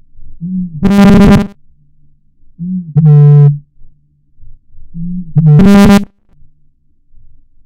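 From 0.83 to 1.55 s and 5.59 to 6.33 s, a rigid metallic 200 Hz buzz appears: robotic sound from repeated short buffers, likely a 5 ms slice replayed for most of the first stretch and all of the second. A spectrogram shows harmonics stacked at 200 Hz multiples, and the waveform repeats identically every 5 ms.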